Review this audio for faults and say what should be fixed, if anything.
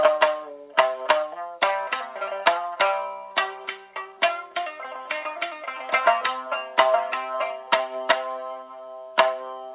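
Nothing stood out on listening, so there is nothing here to fix; the call path is audible only as the narrow band you would expect from G.711 A-law at 64 kbps, with nothing above 4 kHz.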